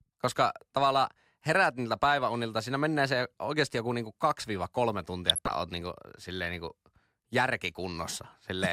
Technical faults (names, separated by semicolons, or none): DAB burbling